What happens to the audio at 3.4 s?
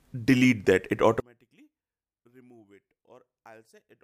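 At 3.4 s the audio sits inside a collapse that runs from 1.20 s to the end, at 4.03 s, where the level falls by about 33 dB. The likely cause is one channel inverted: with one stereo side at reversed polarity, material common to both channels cancels when they are summed to mono, leaving only their difference. Unlike a dropout or mute, this is a deep cancellation rather than a gap, and it holds steadily rather than fading.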